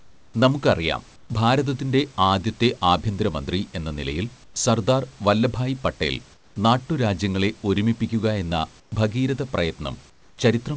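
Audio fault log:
0 to 0.34 s, 1.16 to 1.30 s, 4.44 to 4.56 s, 6.34 to 6.56 s, 8.80 to 8.92 s and 10.10 to 10.38 s: comfort noise in place of the background. The sender likely stopped transmitting in these pauses and the receiver generated filler noise, so the real room background drops to a smoother noise about 7 to 8 dB quieter for 120 to 340 ms each time.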